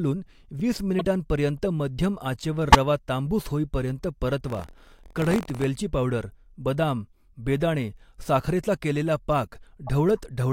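It's a speech clip with three separate problems. At 0.98 to 1.05 s, compressed frames are skipped. Roughly 30 ms of audio goes missing, and the audio jumps ahead by that much at the join. At 2.70 to 2.75 s, right before "रवा तांबूस होईपर्यंत", a corrupt frame was decoded anyway. Damaged bits in a couple of frames throw energy onto the wrong frequencies, giving a burst that peaks at around -5 dBFS. Then from 4.46 to 5.65 s, between "रवा तांबूस होईपर्यंत" and "पावडर बदाम बेदाणे साखरेचा", there's buffer tearing. The writer and reader of the ring buffer have slipped, so a small slice of each period holds audio about 50 ms old. That produces a 43.1 Hz robotic buzz under the speech, which fits a 1024-sample buffer.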